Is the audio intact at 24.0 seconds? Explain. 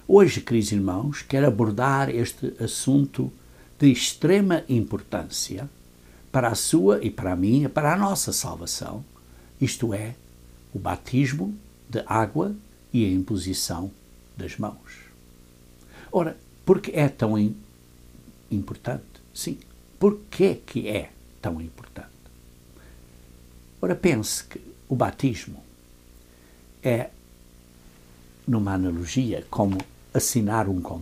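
No. At 24.0 seconds, as throughout the clip, video or display buzz is present. A screen or video cable is coupling into the audio. It adds a 59.94 Hz field-rate buzz with hash above it and a thin 15.7 kHz line tone, roughly 25 dB below the sound.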